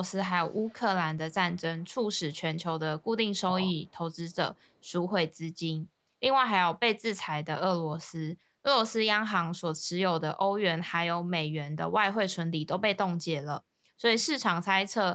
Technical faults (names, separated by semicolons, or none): echo leak